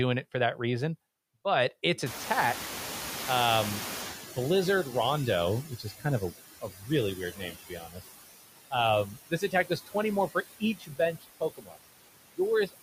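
Right through the speech there are noise suppressor artifacts. The suppressor is pulling what it judges to be steady noise down by about 16 dB, band by band and frame by frame, so the background dips between phrases and swells back up underneath them.

At 2.06 s, just after "that reason but its", you can hear the noise suppressor catching up. The room noise jumps by about 25 dB around the 2 s mark and then sits only about 12 dB below the speech. The suppressor's noise estimate lags that jump, so the louder noise comes through with less reduction at first. Over the next 3.56 s it sinks as the estimate adapts, settling at about 12 dB of reduction by 5.62 s.

Right after that comes a run of speech cut by the noise suppressor, where bits of the talker get mistaken for noise and turned down along with the background. This happens at 5.69–6.05 s, at 6.61–6.9 s just after "of a", at 7.16–8.02 s, at 9.1–9.95 s, at 10.6–10.99 s just after "more for", and at 11.19–11.78 s. 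The drops run about 13 to 20 dB deep, and each one touches a few hundred milliseconds of sound at most. The speech in those stretches comes out swallowed and faint.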